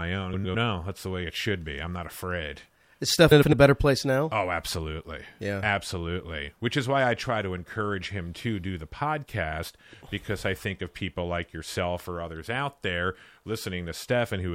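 At 0.33–0.55 s, after "own I", and 3.31–3.53 s, before "a better place now", frames out of order swap two neighbouring blocks of about 105 ms each. Each passage plays as a garbled flutter with no time lost, and a spectrogram shows abrupt discontinuities where the swapped blocks meet.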